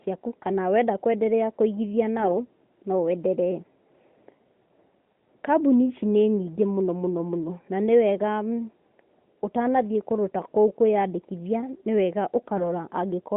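AMR bit errors strike from 2.20 to 2.41 s and again at 5.15 s. A few percent of the weakly protected codec bits arrive flipped, misplacing excitation pulses and skewing fine pitch, gain and spectral values, so the narrowband speech briefly turns hoarse, scratchy and gargly while keeping its level.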